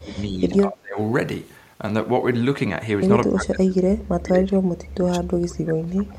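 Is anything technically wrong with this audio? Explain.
Yes, there's speech suppressed in double talk at 0.00 to 0.42, 0.61 to 0.98, 3.27 to 3.88 and 4.04 to 6.18 s. The voice ducks by around 25 dB, and by around 35 dB in the last stretch, likely because the echo canceller mistook it for loudspeaker echo.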